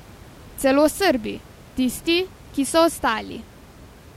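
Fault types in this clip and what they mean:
No faults detected.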